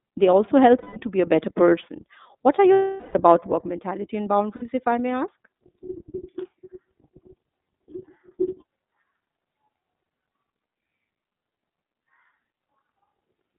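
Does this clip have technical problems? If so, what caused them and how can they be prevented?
Yes. Throughout, the speech sounds boxed-in and a little rough and synthetic. Nothing reaches above about 3.7 kHz or below about 200 Hz. This is the iLBC codec at work: a narrowband VoIP codec that codes each frame's excitation on its own and discards everything outside the telephone band, and its coding damage is plainly audible here. The texture points to iLBC's 30 ms frame mode at roughly 13 kbps. To prevent it, use a wideband codec such as Opus where the network allows, or record locally rather than over the call path.

There are three dropouts from lost iLBC frames, where the speech turns into a held, slightly buzzy vowel. The first runs from 0.78 to 0.98 s, after "they also" and before "to be". The longest runs from 2.73 to 3.15 s, just before "about work mentality and", and it fades as it goes on. 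A brief one falls at 4.56 to 4.63 s, before "if I may". In each case the decoder lost packets and filled the gap by repeating the last pitch cycle mixed with noise. The gap lengths, about 180, 420 and 60 ms, fit runs of 30 ms frames. Because each iLBC frame stands alone, the speech recovers cleanly right after every gap. To prevent it, reduce packet loss with a more stable connection, QoS prioritisation, a larger jitter buffer or forward error correction.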